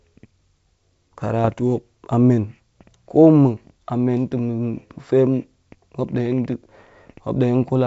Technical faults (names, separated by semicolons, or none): bit errors on an ADPCM link